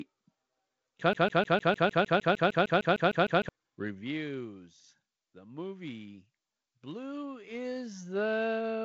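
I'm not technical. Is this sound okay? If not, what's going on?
No. Between about 1.13 and 3.49 seconds, the system sending the audio most likely stalled and kept resending the last small piece of speech it had. This is a broken-record loop: a fragment of about 0.15 seconds plays 15 times back to back, so you hear a rapid, stuttering repeat for over two seconds. Whatever should have been said during that time never arrives. It is simply missing from the recording.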